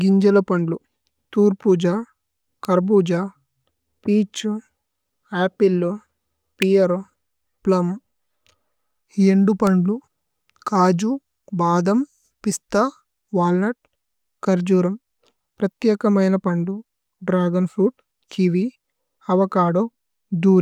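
A nearby switch or motor likely threw short electrical arcs into the audio line, producing an electrical switching spike at 2.65 s, just before "കര് പുജ", then at 6.62 s and 9.67 s. Each is a sharp snap over the speech, the middle one loudest.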